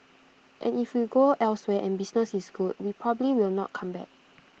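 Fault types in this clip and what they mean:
No faults can be heard in this speech clip.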